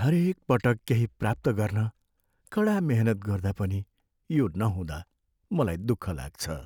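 A speech clip with a block of digital silence at 0.79 s: a 2.27 ms gap, heard as a tick. The waveform shows a flat gap with abrupt edges, and the spectrogram shows a thin vertical broadband line.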